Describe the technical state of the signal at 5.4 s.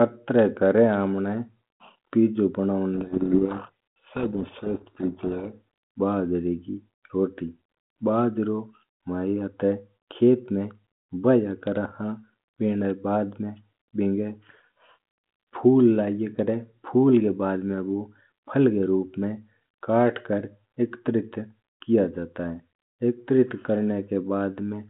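At 5.4 s the signal is inside a codec payload misread running from 2.94 to 5.53 s. The decoder takes the G.726 code words in reversed bit order, burying the speech in harsh distortion. A spectrogram shows dense noise filling the 150 Hz to 3.4 kHz band, and the waveform turns rough and jagged.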